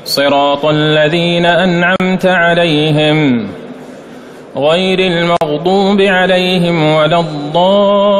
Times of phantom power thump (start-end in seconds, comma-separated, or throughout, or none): none